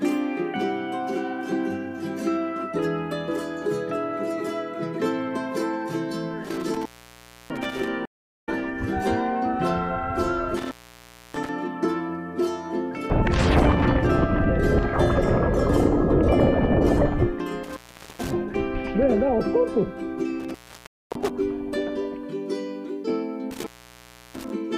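At 6.45 s the sound drops out with a crackle on either edge, leaving only faint hiss for about 0.65 s before it snaps back by 7.88 s. This is an intermittent contact: a loose plug or cable lead briefly loses connection, so the signal vanishes and the scraping metal contacts make the crackle as the circuit opens and closes.

Right after, from 8.05 to 8.49 s, there is a clean silence of about 0.41 s with no crackle, and the audio comes back softly at a point roughly 0.2 s further on, so a small piece is skipped. That is a stream reconnect: the connection broke, the player went quiet, reconnected, and started a fresh decoder mid-stream, which is why the first moment after the gap is muted or fading in.

The same crackling intermittent contact drop returns at 10.57 to 11.49 s (open about 0.63 s), 17.63 to 18.33 s (about 0.43 s), and 20.40 to 21.30 s (about 0.51 s). Inside that last one, from 20.87 to 21.10 s, a second stream reconnect leaves about 0.22 s of silence and resumes roughly a tenth of a second later. 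A final contact dropout runs from 23.51 to 24.50 s, open for about 0.68 s.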